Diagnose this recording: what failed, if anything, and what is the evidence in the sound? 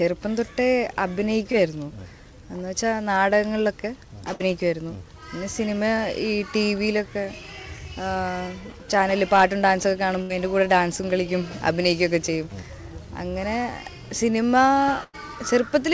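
Network stage, short concealed packet loss from 1.52 to 1.55 s. About 20 ms arrived too late, and the receiver briefly extended the preceding sound, leaving a quick smear.

Network stage, burst of packet loss at 4.33–4.42, 10.22–10.32 and 15.04–15.15 s. Concealment held, then faded the last sound, and the audio resumed with 60, 80 and 100 ms missing.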